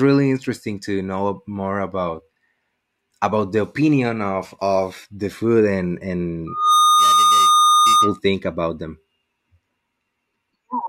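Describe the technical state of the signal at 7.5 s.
Loudspeaker feedback squeal, 6.47 to 8.19 s: the microphone-loudspeaker loop drives a 1.2 kHz tone that swells quickly to about 5 dB above the speech.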